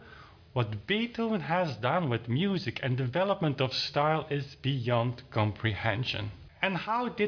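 No technical faults can be heard anywhere in this audio.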